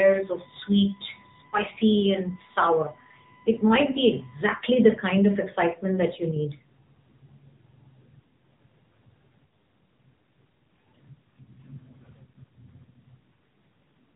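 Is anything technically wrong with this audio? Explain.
Yes. Throughout the speech, the AMR narrowband mobile codec is plainly audible: nothing above 3.8 kHz, and a buzzy, synthetic edge from pulse-driven vocal-tract modelling that fits roughly 8 kbps. That texture, not just missing treble, sets it apart from simple band-limiting.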